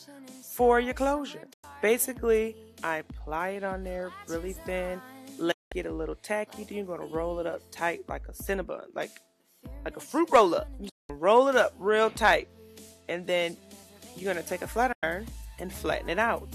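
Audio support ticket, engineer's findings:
Digital broadcast dropout, four short mutes: 1.53–1.64 s, 5.51–5.72 s, 10.89–11.10 s, 14.92–15.03 s. Fast fade to silence, then back mid-programme. Receiver decoder muting on bad frames; gaps of 96 and 192 ms fit runs of 24 ms frames. Missing audio is gone.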